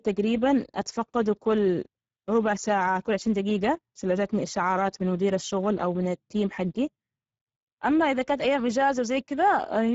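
From start to finish the speech carries Speex codec damage that is plainly audible: a hoarse, noisy roughness on every syllable. This CELP coder is starved of bits for its excitation signal, which fits a rate near 10 kbps, so the voiced detail gives way to grain. Nothing remains above 7.7 kHz. Unlike the swirling, watery artefacts of a transform codec, the damage here is a coarse, throaty rasp.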